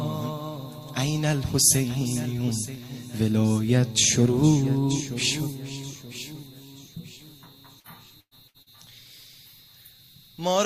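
From 7.79 to 8.69 s, repeated packet loss sets in: data arrives late or not at all, again and again, and each hole is patched by stretching the preceding sound. Roughly a third of that stretch is filled this way, the longest gap 112 ms, leaving choppy, robotic audio with pieces missing.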